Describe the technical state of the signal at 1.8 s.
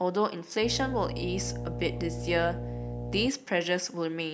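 At 1.8 s the speech carries mains hum, present from 0.61 to 3.30 s. A ground loop or nearby transformer is coupling the 60 Hz power line into the signal, producing a steady low tone with a few low harmonics, sitting only a few decibels below the speech itself.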